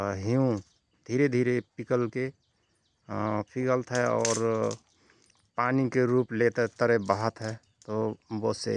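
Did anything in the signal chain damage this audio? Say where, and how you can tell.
No, nothing stood out on listening to this speech recording that would point to damage at any stage of the signal chain.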